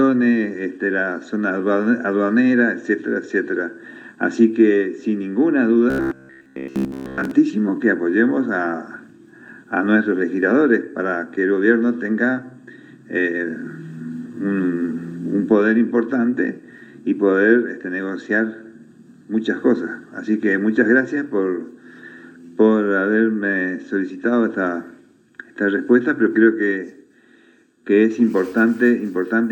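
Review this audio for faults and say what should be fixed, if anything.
From 5.90 to 7.31 s the sound becomes a rigid, metallic buzz at 66.7 Hz. This is robotic sound from repeated short buffers. New audio likely arrived too seldom, so the last 15 ms kept replaying over most of that stretch. Steadier delivery or deeper buffering would prevent it.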